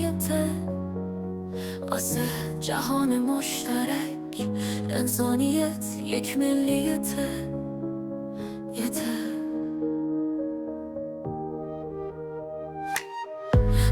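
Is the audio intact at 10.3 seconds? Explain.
Yes, the audio is intact at 10.3 seconds, with no dropout, click, distortion or other fault audible at that moment.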